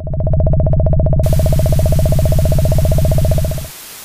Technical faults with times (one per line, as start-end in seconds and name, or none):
1.23-4.04 low bit depth with dither